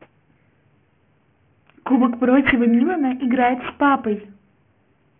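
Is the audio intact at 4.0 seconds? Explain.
No. At 4.0 seconds the speech is affected by aliasing, which runs through the whole clip. The audio was resampled to a lower rate without an anti-alias filter, so content above 3 kHz folds back as unrelated tones, leaving sibilants gritty and metallic, moderately below the signal.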